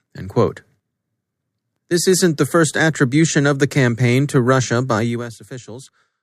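Nothing technically wrong turns up anywhere in this bit of speech, so there's no fault to point to at any moment.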